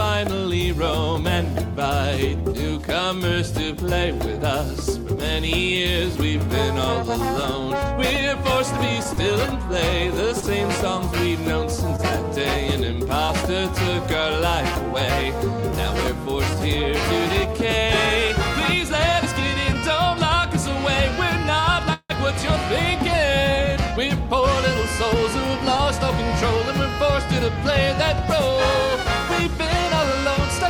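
Between 9.03 and 13.30 s, about five packets were lost or arrived late, causing scattered short gaps. Each hole, the longest around 20 ms, was covered by extending the preceding sound, leaving brief ticks or small smears over a couple of percent of that stretch.

At 21.60 s, a short stall from a late packet occurs. The jitter buffer emptied, so the receiver held the last sound for 29 ms until the packet came. Nothing is lost, but that moment lingers slightly too long with a slight buzz or dip.

From 21.93 to 22.12 s, a call audio freeze follows, likely from packets held up in transit draining the jitter buffer. The sound is stretched into a fading buzz or hiss for 164 ms, including about 60 ms of silence, then resumes exactly where it stopped.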